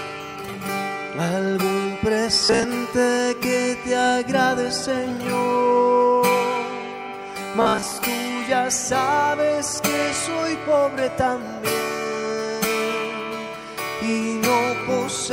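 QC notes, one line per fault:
2.34–2.66 s: robotic sound from repeated short buffers. The sound becomes a rigid metallic buzz at 66.8 Hz, likely from a 15 ms segment replayed while about half the real audio is skipped.
7.62–8.02 s: robotic sound from repeated short buffers. The same 66.8 Hz buzz returns, with most of the audio here likely replaced by repeats of a 15 ms slice.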